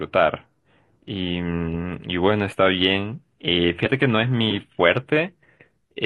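At 3.82 to 3.88 s the speech breaks up briefly, for about 60 ms, typical of damaged data in a compressed stream: the decoder misreads corrupted frames and loses sync.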